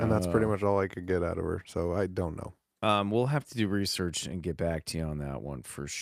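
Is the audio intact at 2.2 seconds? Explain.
Yes, the speech at 2.2 seconds is intact, with no dropout, click, distortion or other fault at that moment.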